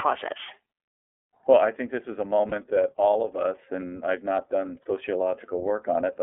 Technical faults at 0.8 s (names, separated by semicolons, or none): iLBC codec